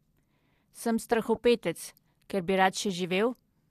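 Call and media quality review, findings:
Corrupt frame decoded, 1.35–1.38 s in speech. Decoder accepted a bit-damaged compressed frame, likely two consecutive frames, and played it without concealment. Misread gain and spectral codes placed energy in the wrong bands for about 24 ms. Audible as a short chirp or noise blip, peaking around -30 dBFS. Probable component: transport or jitter-buffer path passing errored payload without a checksum reject.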